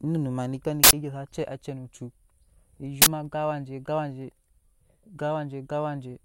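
After "ma nike" at 0.84 s and before "gan awaje" at 3.02 s, loud 93 and 46 ms noise bursts reveal an uninitialised buffer playing leftover memory.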